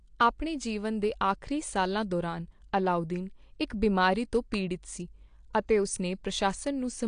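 Speech runs the whole way through with a dull, smeared top end and audible warbly swirl on sibilants, most likely AAC compression at a low rate, which fits roughly 32 kbps; nothing survives above about 9.8 kHz. At 4.54 s there's a brief sharp snap laid over the audio, likely an electrical switching spike from a nearby switch or discharge arcing into the line.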